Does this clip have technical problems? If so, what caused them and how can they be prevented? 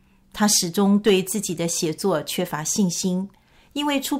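No, there are no technical faults to trace to a cause or prevent here.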